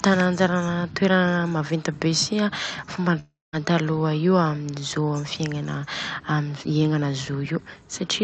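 From 3.19 to 3.55 s the speech breaks off. The last sound drags on as a fading buzz, followed by 200 ms of silence, and the audio resumes with 340 ms missing. This is likely a long network dropout, with the receiver papering over audio that never arrived.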